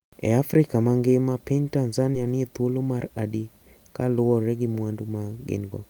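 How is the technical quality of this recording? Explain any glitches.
There is one glitch in this speech recording. From 2.11 to 2.15 s there is a brief smear or wobble. This is short concealed packet loss: about 20 ms of audio arrived too late. The receiver patched 14 ms by extending the preceding sound, then crossfaded back into the real signal.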